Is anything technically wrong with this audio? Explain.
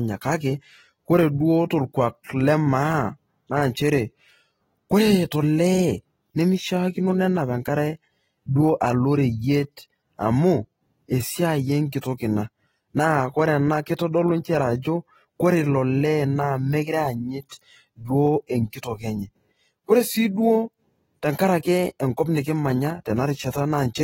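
Yes. Throughout the speech the sound is dull and fizzy, with no content above 16.6 kHz. This is likely AAC compression at a low bitrate, around 24 kbps.

Pre-echo occurs at 2.23 s; at 12.01 s, after "amu esiai"; at 17.49–17.51 s, before "duo enkitok enye ore"; and at 18.47–18.49 s, before "enkitok enye ore sii". The codec's block-wide quantisation noise leaks ahead of each attack as a short hiss lasting 16 to 28 ms. On a waveform this shows as a low noise smear just before each onset.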